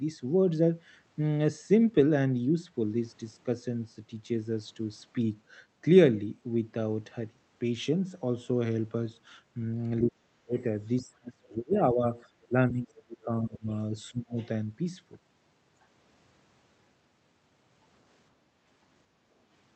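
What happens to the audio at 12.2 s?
A faint, brief scrap of a second voice, roughly 30 dB below the speech, slips through from 12.15 to 12.2 s. This is the other side's voice leaking through, likely because the echo canceller left loudspeaker echo in the microphone signal. Just before, from 11.0 to 12.1 s, the speech dips by around 25 dB. That is speech suppressed in double talk, likely where the canceller turned both talkers down when they spoke at once.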